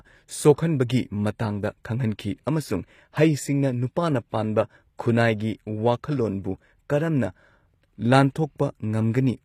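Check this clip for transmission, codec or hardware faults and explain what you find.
One fault runs through the entire speech clip: the treble has been synthesised rather than carried, most likely by HE-AAC compression. The damage is plainly audible from start to finish. The codec sends only the lower spectrum and rebuilds the highs by copying lower bands upward under a coarse envelope, a pattern that fits HE-AAC v2 at about 24 kbps. The s sounds come out gritty and lispy, with a metallic sheen. On a spectrogram the upper band looks like a smeared, repeated copy of the region below, and its harmonics fail to line up across the crossover.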